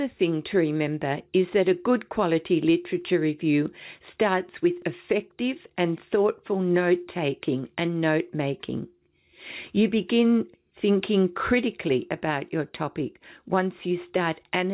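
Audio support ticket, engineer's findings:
No fault found; the call path is working as expected, with nothing above 4 kHz, which fits a narrowband G.711 mu-law link.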